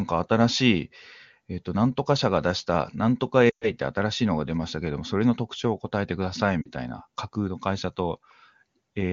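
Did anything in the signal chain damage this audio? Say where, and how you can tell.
Yes. The damage happened in the radio link feeding the AMR decoder: these are lost AMR speech frames. Corrupted frames failed their checks, so the AMR-WB decoder concealed them by replaying the last good pitch and vocal tract settings at falling gain. From 3.49 to 3.70 s the sound drops to near silence, which fits about six 20 ms frames lost. At 6.62 to 6.70 s a shorter warble suggests two frames.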